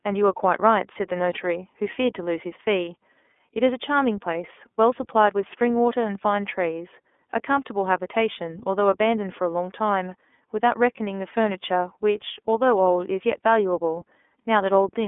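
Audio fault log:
Throughout: iLBC codec. The speech is squeezed into a narrow telephone line, roughly 250 Hz to 3.5 kHz, so it sounds thin and boxy. Its coding damage is plainly audible. The voice has a rough, slightly synthetic edge. The bitrate points to the 13.33 kbps mode with 30 ms frames. Each frame's excitation is coded on its own, and that coarse modelling of the waveform is what gives the grainy, artificial texture.
2.85 to 2.88 s: lost iLBC frames. A single 30 ms frame goes missing. The decoder fills the hole by repeating the last pitch cycle blended with noise. For that instant the sound turns into a brief held, faintly buzzy vowel. Each iLBC frame stands alone, so the decoder does not need earlier frames to recover. Clean speech returns straight after the gap with no lingering smear.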